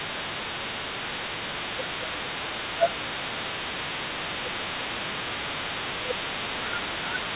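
From the start to 0.67 s, then 0.87–1.18 s, 1.64–3.76 s, 4.41–5.41 s, and 5.99 s to the end, the talker's speech is pushed down by around 20 dB (nearer 15 dB in the second dip). This is speech suppressed in double talk, likely from an echo canceller that heard both sides at once and turned everything down. Unlike the steady 4 kHz band limit of the G.711 call path, these drops come and go.

From 0.1 s onward, the other side's voice is leaking through at about 20 dB below the talker. This is likely loudspeaker echo that the canceller failed to remove. It adds a faint second voice rather than taking level away.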